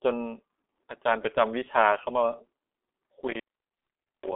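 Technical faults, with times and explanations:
throughout: G.723.1 codec. The speech has been squeezed through a low-rate telephony coder, and the heavy damage points to a rate around 6 kbit/s. It encodes in 30 ms blocks and updates its model of the voice only slowly. The line band runs from about 250 Hz to 3.5 kHz, and nothing survives above 3.7 kHz. The result is muffled and hoarse, and consonants smear together because fast changes fall between the coder's updates.
3.27–4.32 s: intermittent contact. A loose plug or cable connection breaks the signal path for roughly 0.84 s of that span, so the speech drops out almost completely. The contact does not part and rejoin cleanly, which leaves crackle where the sound cuts out and where it returns. While the connection is open, only a faint hiss remains in place of the signal.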